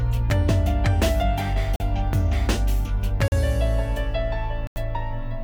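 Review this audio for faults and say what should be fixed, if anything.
Block of digital silence at 1.76 s and 3.28 s (40 ms each) and at 4.67 s (about 90 ms): the audio drops to nothing and returns with no fade, leaving short holes. The output buffer was either not filled in time or was zeroed after a calculation produced invalid values. To prevent it, give the audio thread enough buffer headroom and priority, and guard the processing chain against invalid numbers.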